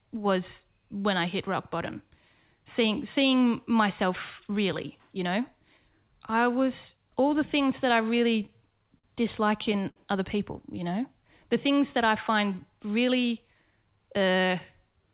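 From 8.18 to 9.05 s there's a run of repeated stalls (stutter). Packets kept showing up late, so the jitter buffer ran dry seven times and the receiver stretched the last sound to cover about 114 ms in total, with the longest gap 50 ms. Nothing's lost, but roughly 13% of that stretch is filler, so the speech drags and hiccups.

Just after that, from 9.89 to 9.98 s, right before "other people", comes a short stall from a late packet. One packet missed its slot, the buffer emptied, and the receiver held the previous sound for 66 ms until the packet arrived. It's a single drawn-out moment with a faint buzz or dip, and the delay ends up 66 ms longer.

Between "other people" and "the things that I", from 10.74 to 11.14 s, there's a jitter buffer slow-down. The buffer was building up a reserve, so the receiver repeated single pitch periods and added 38 ms. That section plays at 92% speed with the pitch unchanged, so it sounds slightly stretched.

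After "things that I find", from 13.10 to 13.77 s, there's a jitter buffer speed-up. The buffer had more audio than it wanted, so the receiver cut out small pitch-period pieces totalling around 70 ms. The speech runs at 111% speed with the same pitch and sounds a bit rushed. Throughout, the narrowband call path cuts off everything above 4 kHz, which fits a G.711 call.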